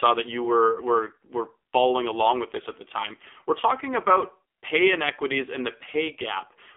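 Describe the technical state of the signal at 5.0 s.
At 5.0 s the speech is still passing through the AMR narrowband mobile codec, which runs for the whole clip. It encodes 20 ms frames as a vocal-tract model excited by sparse pulses, and the line band spans 300 Hz to 3.5 kHz. The heavy buzzy, synthetic coloration fits the 5.9 kbps mode.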